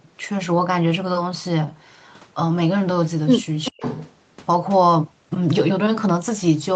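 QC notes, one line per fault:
3.65–4.11 s, echo leak: a faint delayed copy of the speech, trailing by 387 ms and roughly 15 dB below it, likely from a loudspeaker echo the canceller missed.
3.70–3.82 s, speech suppressed in double talk: the near talker drops by around 40 dB for about 100 ms, likely because the canceller turned down both its own talker and the loudspeaker echo when they overlapped.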